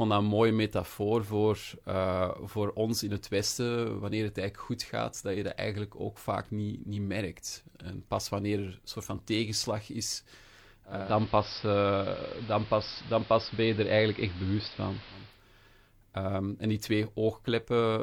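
Digital radio blending to analogue runs from 10.86 to 15.44 s. The receiver loses the digital stream and cross-fades over about 0.36 s to the station's AM broadcast, then returns to digital at the end. During that stretch the speech is band-limited, so it turns dull and boxy. The level shifts by about 2 dB, and a hiss floor sits roughly 20 dB below the speech.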